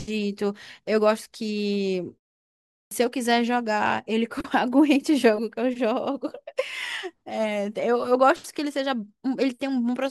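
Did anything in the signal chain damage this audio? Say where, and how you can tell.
Yes. At the playback end there's a clipped start after a pause. After about 0.68 s of silence, the speech comes back at 2.79 s with its onset gone, and the first 122 ms (up to about 2.91 s) never make it out. The word just snaps in mid-sound. That fits an output device that dozed off during the gap and hadn't woken and relocked before the speech arrived.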